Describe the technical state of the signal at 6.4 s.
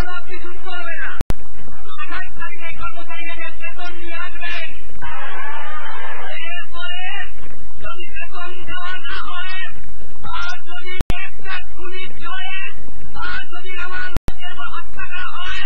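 At 6.4 s the signal is intact, with no audible fault at that moment.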